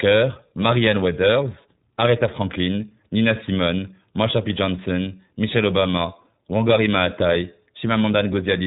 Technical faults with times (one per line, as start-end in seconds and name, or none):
0.00-8.67 iLBC codec